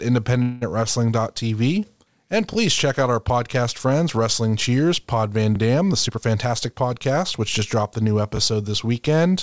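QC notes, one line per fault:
0.42–0.71 s, call audio freeze: the sound stalls and is stretched into a fading buzz for about 195 ms, then resumes where it stopped with nothing lost. The likely cause is delayed packets draining the jitter buffer. A spectrogram shows smeared, decaying harmonics in place of normal detail.
2.53–2.56 s, 5.56–5.58 s and 8.37–8.39 s, overlapping chunks: at each join a 21 ms slice plays twice, giving a click or stutter every 3.0 s. The first falls just before "check out our podcast", the last just after "dropped the new". The waveform shows a short repeated segment with a discontinuity at each seam.
5.92–7.59 s, jitter buffer speed-up: the sound runs about 12% fast at unchanged pitch, sounding hurried up to "dropped the new". Roughly 200 ms is removed in many pitch-period cuts. A spectrogram shows compressed timing with harmonic spacing unchanged, above a band that stops at 8 kHz from the G.722 call codec.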